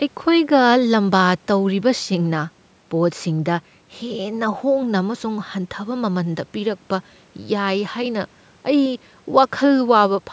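No faults can be heard anywhere in this speech.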